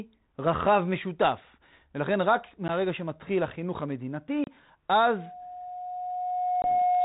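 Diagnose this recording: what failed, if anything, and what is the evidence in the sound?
Short hard-edged dropouts break the speech at 2.68 s (about 10 ms), 4.44 s (about 30 ms) and 6.62 s (about 20 ms). After each one the speech comes back slightly distorted, with brief roughness that clears within some tens of milliseconds. This is packet loss on an ADPCM call, a network-stage fault. The missing stretches, roughly one, three and two packets, were filled with silence. The decoder's adaptive predictor and step size then lost track of the sender's and needed a moment to resynchronise. The narrowband G.726 character at 32 kbit/s sounds like its ordinary light coding noise.

From 5.04 s to the end, a steady 723 Hz tone swells out of the audio over roughly one and a half seconds and settles about 5 dB above the speech. This is loudspeaker feedback squeal, an acoustic fault in the playback path. 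A microphone was picking up the loudspeaker it feeds, and around 723 Hz the loop gain rose above one. That single frequency kept reinforcing itself until the system's limits held it at a sustained howl.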